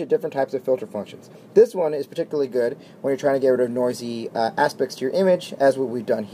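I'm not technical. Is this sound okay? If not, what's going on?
Yes, no faults are audible.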